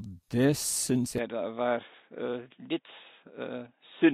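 Speech, where the recording likely switched its input to a poorer device at 1.18 s, right after "det syns": from there to the end, nothing above 3.8 kHz survives, the sound turns dull and slightly quieter, with no gap at the switch.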